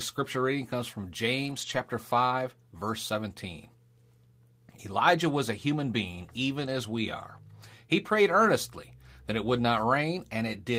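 At about 1.45 to 1.75 s there's a lost packet rebuilt from error correction: eight separate lost packets got filled from the low-bitrate copies tucked into the following packets. That gives no gap, just 160 ms of rougher, noisier speech.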